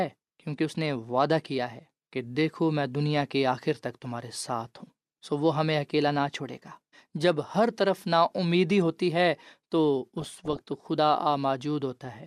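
A speech recording with one burst of DAB burbling from 10.19 to 10.68 s. The cause is weak reception letting bit errors, on the order of one bit in a hundred, slip past error correction into the MP2 stream. Corrupted samples put short blips of noise in single sub-bands, and corrupted scale factors throw individual sub-bands up or down in level for up to a frame. On a spectrogram this appears as flickering rectangular blocks in separate frequency bands; the waveform shows ragged, jumpy envelope steps.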